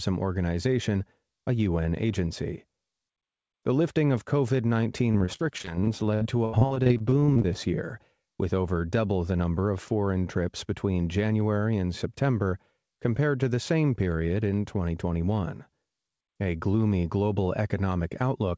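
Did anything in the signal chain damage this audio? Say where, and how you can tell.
Yes: the network stage lost packets again and again from 5.12 to 7.57 s, ending just before "year with over double". This repeated packet loss left about two dozen gaps, the longest 79 ms, each filled by extending the preceding sound. Roughly a quarter of that stretch is concealment, so it sounds choppy and robotic.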